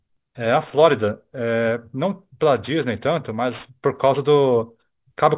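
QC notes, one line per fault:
Throughout, aliasing: energy above 4 kHz has folded back into the band as unrelated tones, leaving sibilants gritty and metallic and the spectrum running hard to the edge. This fits a drop to an 8 kHz rate without an anti-alias filter, with the fold-back roughly 30 dB under the speech.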